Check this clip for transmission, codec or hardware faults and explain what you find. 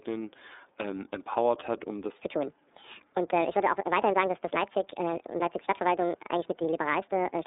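Two faults are present: band-limited, coded sound across the whole clip, and a sudden jump in speed near the start that lasts to the end.

From the first moment the speech is narrow and boxy, with nothing above about 3.8 kHz and a plainly audible rough, synthetic edge. This is the iLBC codec. It squeezes speech into a telephone band of roughly 300 Hz to 3.7 kHz and codes each frame's excitation on its own, without drawing on the previous frame. That frame-by-frame coarseness produces the grainy texture, and it fits iLBC's 30 ms, 13.33 kbps mode.

At 2.19 s, right after "empowert hat um das", the speech suddenly becomes high and hurried and stays that way until the end. It plays 1.66 times too fast, with the pitch raised by about ten semitones. This is a section at the wrong speed: speed and pitch rise together, as happens when audio is played against a clock that doesn't match the one it was recorded with. 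The likely cause is a player or editor applying the wrong sample rate from that point onward.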